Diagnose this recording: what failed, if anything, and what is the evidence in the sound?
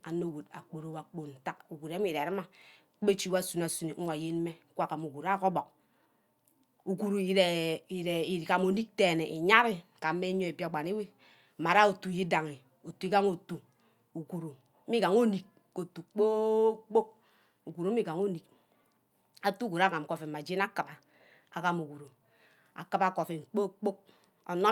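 Nothing failed in this recording, and the speech offers no evidence of a fault at any stage.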